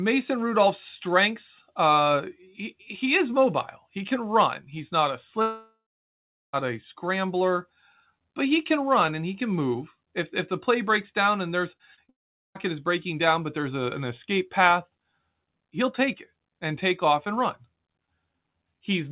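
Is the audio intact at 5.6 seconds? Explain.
No, 5.6 s falls inside a long network dropout running from 5.42 to 6.67 s, just after "not a". The likely cause is that packets stopped arriving for over a second, so the receiver stretched the last sound into a fading buzz before settling into about 0.73 s of silence. When the audio resumes, roughly 1.1 s of the original is simply gone, skipped over rather than delayed.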